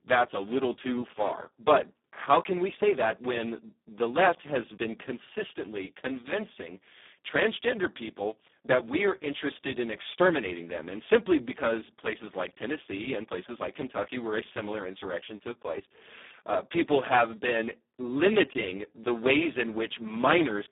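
The speech here has passed through the Speex codec at one of its lowest settings, with damage so heavy that it fits a bitrate around 4 kbps, leaving almost no bits to code the excitation. Throughout, the speech is noisy, hoarse and edging toward robotic. The band is confined to a narrow telephone-style window of roughly 200 Hz to 3.7 kHz, and nothing at all sounds above 3.8 kHz, giving a muffled, boxy tone.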